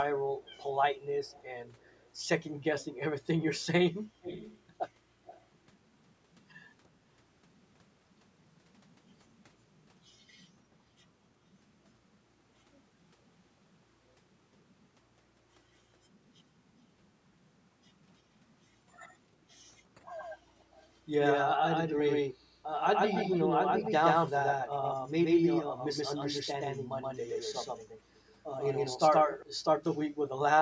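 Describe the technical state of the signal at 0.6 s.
At 0.6 s the signal carries an echo leak, running from 0.41 to 0.64 s: a very faint delayed copy of the speech, trailing it by about 334 ms and sitting far below the direct voice. The likely cause is a far end playing the call over a loudspeaker, where the echo canceller failed to fully suppress what its microphone recaptured, returning that residue down the line. The band-limiting to 8 kHz from the call's microphone processing is normal.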